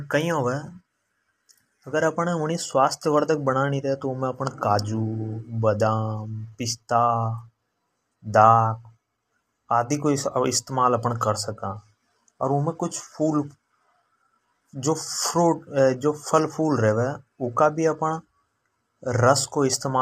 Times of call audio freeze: none

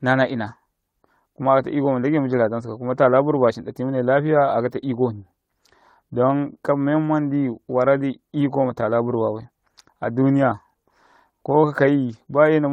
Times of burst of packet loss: none

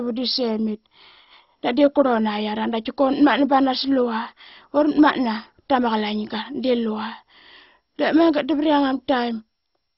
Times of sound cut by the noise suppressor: none

